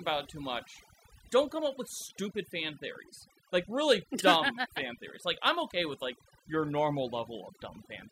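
From start to finish the speech carries overdone noise removal: a denoiser set too hard has muted individual frequency bands near its noise estimate, taking soft voice detail with them. Unlike a noise gate, which shuts everything at once, the pauses fall to near silence that still twinkles.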